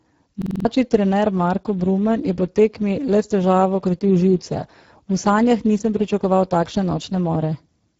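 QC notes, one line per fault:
Throughout: Speex codec. Speech sounds hoarse and noisy, with clearly audible codec damage from the CELP coder running short of bits for the excitation signal, which fits a low setting near 10 kbps. Nothing is present above 7.7 kHz, and the top band is thin, noise-like fill.
0.42–0.65 s: system hang loop. A 46 ms piece of audio repeats exactly five times at 21.5 Hz, producing a rapid machine-gun stutter while the ring buffer cycles unattended. This fits a 2048-sample buffer, and roughly 200 ms of audio is lost.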